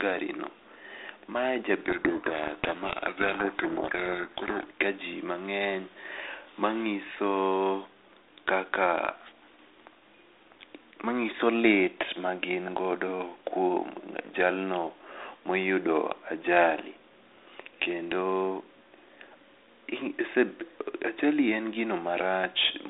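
From 1.84 to 4.65 s, a codec payload misread occurs: the two ends disagree on the bit order of the G.726 code words, so the decoder applies each adaptive-prediction step from scrambled bits. On a 32 kbit/s G.726 line that otherwise shows only light codec damage and a band of roughly 300 Hz to 3.7 kHz, the speech here is buried under harsh, grinding distortion. It clears just before "ka ji mangeny".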